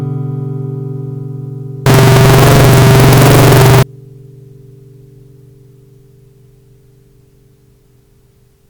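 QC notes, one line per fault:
1.86–3.83 s, signed and unsigned mixed up. The sound turns into loud, harsh distortion, and quiet moments blast as loudly as the rest. The likely cause is 16-bit samples read with the wrong sign convention. That flips the top bit, so every zero crossing leaps across the full range.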